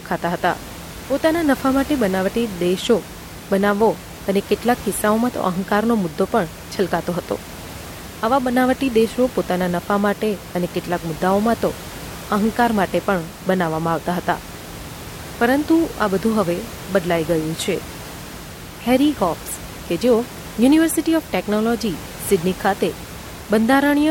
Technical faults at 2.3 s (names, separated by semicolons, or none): none